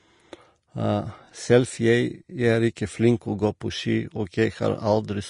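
Likely Vorbis compression at a low bitrate, around 35 kbps, throughout this speech: nothing above 10.5 kHz, and the coarsely quantised treble turns hissy and grainy, blurring attacks.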